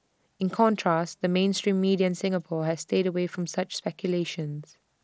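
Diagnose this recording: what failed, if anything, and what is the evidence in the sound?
Nothing here has failed; the speech simply comes over a Bluetooth headset link using the mSBC codec, and the top end stopping around 8 kHz, with a faint grain on the louder moments, is just how that codec normally sounds.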